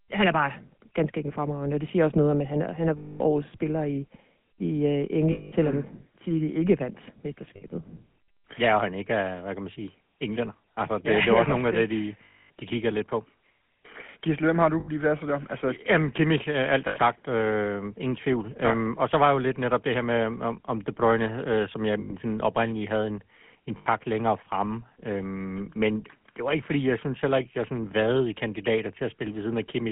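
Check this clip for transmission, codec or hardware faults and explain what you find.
Two faults run through this speech: GSM full-rate coding across the whole clip, and eight short dropouts patched by lost GSM frame concealment.

GSM full-rate codec, throughout: the speech sounds buzzy and gravelly, squeezed into a telephone band of roughly 150 Hz to 3.4 kHz. The 13 kbps codec rebuilds speech from a vocal-tract filter fed by sparse, regular pulses, so fine excitation detail is lost and roughness replaces it.

Lost GSM frames, at 2.98–3.21 s, 5.32–5.53 s, 7.56–7.63 s, 12.24–12.50 s, 14.80–14.89 s, 16.88–16.97 s, 22.00–22.13 s and 23.78–23.87 s: each gap turns into a rough, metallic held ring. Missing frames are filled by replaying the last good frame's settings at dropping gain. Gaps last 60 to 260 ms. The longest, at 12.24 s, runs 260 ms.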